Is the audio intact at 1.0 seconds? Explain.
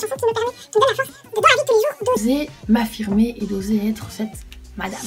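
No. Audio read two samples at a time (double speed) runs from 0.0 to 2.17 s: consecutive sample pairs become single frames, so playback doubles and jumps an octave.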